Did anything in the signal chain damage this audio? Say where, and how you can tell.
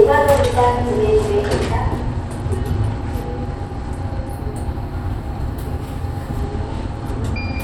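Yes. A Bluetooth SBC bit pool drop in the codec, at 0.32–4.32 s and 6.38–7.63 s, starves the upper sub-bands, so the treble dulls and gritty quantisation noise rises.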